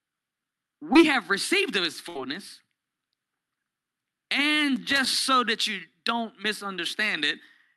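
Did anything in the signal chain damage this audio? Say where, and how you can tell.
Yes. The network stage dropped a short stretch of the call around 0.93 to 0.97 s, just before "have received of his". About 20 ms of audio never arrived in time, and the receiver's short concealed packet loss handling covered the gap by extending the preceding sound from its pitch or as shaped noise, then crossfading back into real audio. It is heard as a brief smear or wobble in the speech, small enough that a quick consonant could slip away.

A larger burst of packet loss hits the network stage at 2.09 to 2.17 s, right after "have received of his". Roughly 60 ms went missing in a row, and the concealment continued the last sound while fading it down. The result is a short held buzz or dying hiss, after which the speech picks up further along with that slice simply gone.

The analogue wiring is at fault from 4.76 to 5.07 s, ahead of "so that you don't". 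This is loose connector crackle. A worn or dirty contact kept making and breaking, chopping the signal, so roughly a third of a second is overlaid with irregular scratchy crackle. The crackle is ragged and noisy rather than smoothly filled in, so it comes from a physical connection and not from network concealment.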